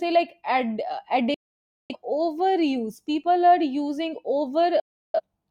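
A speech recording with two digital broadcast dropouts, where the receiver muted after losing or rejecting frames. At 1.34 s, just after "like ad", the sound cuts out until 1.96 s and returns at "overuse people are using". A second, shorter hole runs from 4.80 to 5.20 s. Each cut fades in about 3 ms. On a waveform and spectrogram, both show as flat, fully blank gaps with sharp edges. Their lengths of roughly 0.55 and 0.34 s fit a run of about a dozen and eight lost frames.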